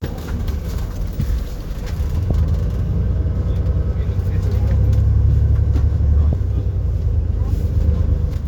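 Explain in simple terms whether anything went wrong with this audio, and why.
The sound jumps ahead at 0.97, 2.30, 6.33 and 8.34 s. These are compressed frames skipped: chunks of the file were missing or rejected as damaged.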